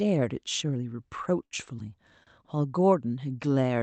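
Speech carried over a call path whose coding, which fits Opus, cuts off the top near 8 kHz. It has two short stalls from a late packet, at 1.45–1.54 s and 2.23–2.30 s. Each time the jitter buffer ran empty, so the receiver held the last sound for about 57 ms and 37 ms, with nothing lost. On a spectrogram, the harmonics stretch flat and smeared, and the waveform repeats one cycle.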